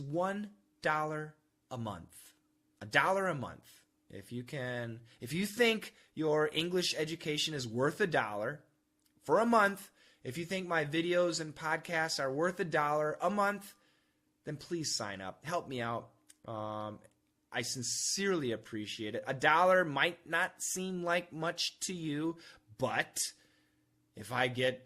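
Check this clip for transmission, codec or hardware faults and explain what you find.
No faults found in this recording.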